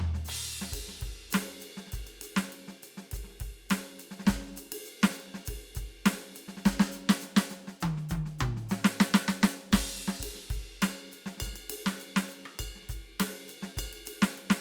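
Nothing in this music stood out as a technical problem on listening.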